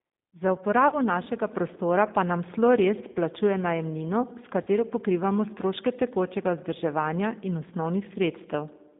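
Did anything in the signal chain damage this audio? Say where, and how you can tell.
Yes. The G.729 codec is audible throughout at the codec stage. The speech is confined to about 200 Hz to 3.7 kHz and sounds plainly rough and synthetic, which fits an 8 kbit/s pitch-and-pulse vocal-tract model.

VoIP packet loss concealed by the speech codec occurs at the network stage at 0.88–0.95 s (before "našega prostora pa nam"), 3.12–3.18 s and 4.63–4.68 s. Each gap is about 40 ms, which fits two lost packets. The decoder fills each gap with a fading extrapolation of the last pitch and filter.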